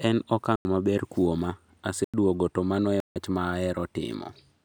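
Three times in this speech recording, the program likely failed to fill its output buffer in time and zeros went out instead, leaving a block of digital silence. The first two, at 0.56 s and 2.04 s, each last about 93 ms, which fits a 4096-sample buffer. The third, at 3.00 s, runs about 157 ms. The sound drops straight to nothing and returns without any fade, so each gap is heard as a short hole.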